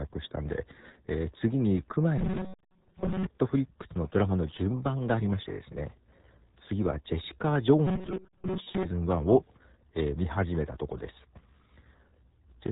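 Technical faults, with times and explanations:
Throughout, RealAudio 14.4 codec: the 8 kbit/s dial-up speech coding leaves the speech gargly and muffled, with nothing above 3.8 kHz, unlike plain low-pass filtering, which stays clean.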